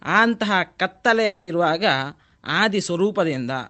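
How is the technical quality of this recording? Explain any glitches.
The recording has one clear glitch, a long network dropout, heard over an Opus call path whose top end stops at about 8 kHz.

From 1.25 to 1.49 s the speech breaks off and is replaced by a smeared, buzzy continuation of the preceding sound that fades without ever dropping to true silence. This is likely packet loss: about 220 ms of audio never arrived, and the receiver's concealment filled the whole gap before normal speech resumes with that stretch missing. A brief concealed packet loss would last only tens of milliseconds, and a plain mute would leave hard silence. This gap lasts about a quarter-second and is entirely synthetic fill.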